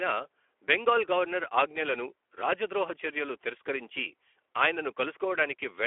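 From start to finish the speech carries Speex codec damage, plainly audible, hoarse and noisy. That fits roughly 11 kbps CELP coding over a 300 to 3400 Hz telephone band.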